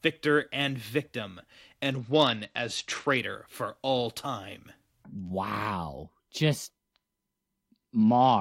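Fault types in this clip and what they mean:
Bluetooth SBC bit pool drop: The wireless link got congested, and the phone cut the bits given to each SBC frame to keep audio flowing. The top sub-bands get starved, and the rest are quantised coarsely. Here the speech turns dull and gritty from 1.90 to 3.17 s, between "victor and victim" and "for all time", and again from 8.01 s to the end. The damage fits a bit pool falling from 31 to 10, near 77 kbps.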